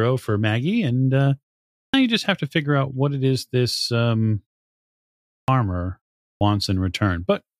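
A speech clip with clipped starts after pauses. At 1.90 to 1.94 s, before "you just have to", about 36 ms is lost. Similar losses of about 40 ms occur at 5.44 to 5.48 s and 6.37 to 6.41 s. The output device sleeps in silence and wakes late, so each onset begins abruptly.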